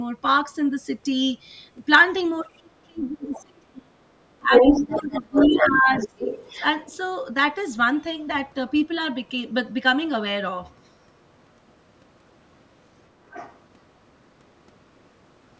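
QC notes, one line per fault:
2.42–3.97 s and 4.39–6.08 s, speech suppressed in double talk: the main talker's level sags and breaks up while a second voice is present. The deepest drop is roughly 35 dB in the first stretch, with about 1.5 s affected in all, and roughly 20 dB in the second, with about 1 s affected. The likely cause is an echo canceller that could not tell the local talker from loudspeaker echo and pulled both down. Unlike a network dropout, the dips follow the overlapping voice and come in pieces rather than clean silences.
2.96–3.43 s, 4.53–6.64 s, 10.71 s and 13.29–13.6 s, other side's voice leaking through: a second voice sits behind the talker. It is about 20 dB down at 2.96 s and 13.29 s, close to equal level through 4.53–6.64 s, and only a faint scrap about 40 dB down at 10.71 s. This is likely loudspeaker playback left behind by the echo canceller.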